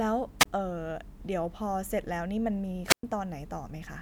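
At 0.39 s and again from 2.86 to 3.03 s the speech hits a wireless microphone squelch dropout. The radio link fades, hiss swells, then the receiver's squelch mutes everything. The first hole is short, about 24 ms, and the second about 111 ms.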